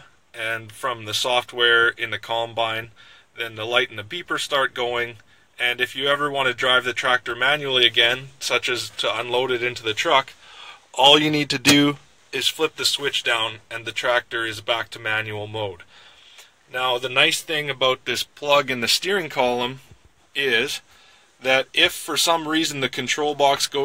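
Nothing here trips up the ear at any point; there's no fault to point to anywhere along the way.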